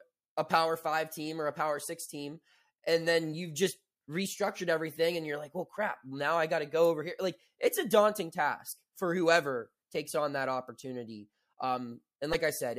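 At 12.32 to 12.35 s, a broken MP3 bit reservoir is the likely cause: after frames went missing, the next frame borrowed bytes belonging to another frame. The speech skips ahead, and a roughly 30 ms glitch, about one 26 ms frame, follows.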